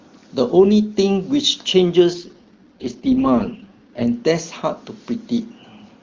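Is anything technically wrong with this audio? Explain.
Yes. From 2.13 s to 4.05 s the speech undergoes an AMR rate drop. The roughness points to the codec stepping down from its 23.85 kbit/s HD Voice rate to about the 6.6 kbit/s mode, as a network does on a weak radio link to free bits for error protection. The audio band stays the same and there is no gap, but the speech turns raspy and synthetic for those two seconds, then regains the clearer wideband quality once the higher rate returns.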